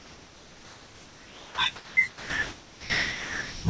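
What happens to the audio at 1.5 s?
Onset clipped by the voice detector, from 1.48 to 1.58 s: the speech comes in abruptly, with about 100 ms of its soft beginning missing. The sender's voice activity detector was likely slow to register that sound had resumed, so those first moments were never transmitted, and the receiver kept playing filler noise until real audio arrived. The result is a hard, truncated attack on the first sound after the pause.

Comfort noise in place of the background runs from 0 up to that point at 1.58 s. During the silence the sender likely stopped transmitting audio (discontinuous transmission), and the receiver generated synthetic noise roughly matched to the background, sitting about 27 dB below the loud parts. The room's real ambience is replaced by a smooth, featureless hiss about 7 dB quieter, which cuts straight to the clipped onset.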